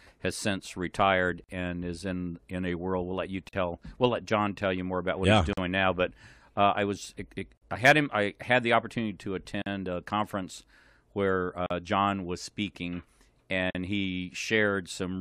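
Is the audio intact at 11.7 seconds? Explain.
No. A gap at a join of encoded pieces opens at 11.66 to 11.71 s, just after "a conference where". Separately encoded pieces were joined untrimmed, so start-up delay and last-frame padding leave a gap of about 43 ms with smeared edges before the speech carries on from where it stopped.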